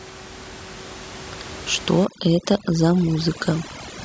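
From 2.05 s to the end of the speech, the background drops and breaks up into twinkling specks. This is overdone noise removal: a noise reduction stage set far too strong pushes individual frequency bands down or off whenever they sit close to its estimate of the noise. Before 2.05 s the room noise sits about 16 dB below the speech, and once the processing takes hold, the quieter parts of the voice are stripped out along with it.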